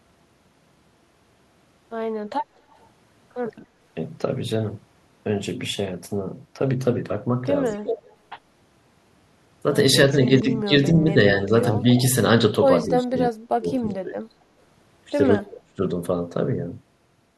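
At 2.74 to 2.86 s a faint echo leak appears: a delayed copy of the speech arrives about 228 ms late, far below the direct signal. Residual loudspeaker pickup that the far end's echo canceller likely failed to subtract is being returned. From 7.74 to 8.06 s the speech is suppressed in double talk, dipping by roughly 20 dB. During that window, from 7.88 to 8.16 s, the echo returns nearly as loud as the speech, at the same 228 ms lag. Further double-talk suppression dips at 10.42 to 11.51 s are milder, around 10 dB. A moderate echo scrap follows at 11.95 to 12.02 s. From 12.88 to 14.35 s the speech is pulled down hard, about 35 dB at worst, with pieces cutting out for about a second in total, and a weak echo fragment lands at 13.89 s. A final deep cut of similar depth hits 15.36 to 15.81 s. The gating pattern points to the canceller likely confusing the local talker with echo and attenuating both.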